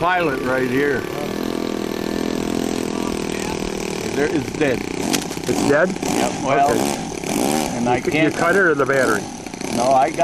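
From 4.99 to 5.53 s, a dense, uneven scratching and rustling rides over the audio, roughly 10 dB below it. This cable scratch noise is likely from a worn cable, connector or control being moved, its contact resistance flickering rapidly.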